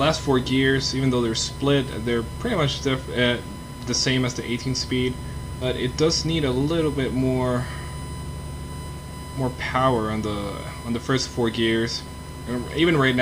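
A steady USB whine sits under the whole recording, a fixed 1 kHz tone about 20 dB below the signal, consistent with the bus's 1 ms frame rate leaking into the audio through power or ground; on a spectrogram it shows as an unbroken horizontal line at 1 kHz from start to finish. At 5.61 s the playback does a skip ahead, jumping forward with no gap filled, so roughly a second of audio is simply gone and the two sides butt together; the waveform shows an abrupt splice with no silence or fade, and the spectrogram a sudden change in content at that column. From 6.27 to 7.17 s a jitter buffer speed-up runs the audio at about 106% with unchanged pitch, as the receiver trims short pitch-period slices, around 70 ms in total, to drain excess buffered audio; this stretch sounds slightly hurried, and its spectrogram shows harmonics at normal spacing but events packed closer together in time.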